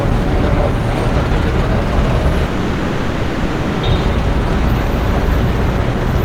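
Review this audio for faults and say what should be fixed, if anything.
Long network dropout, 2.47 to 3.85 s: about 1.36 s of sound is missing, and the whole gap is filled with a concealment buzz that stretches the last sound before fading. The likely cause is a stall in packet delivery, and the audio resumes without the lost part. Prevent it with a more robust transport, such as forward error correction, retransmission or a deeper jitter buffer, on a steadier connection.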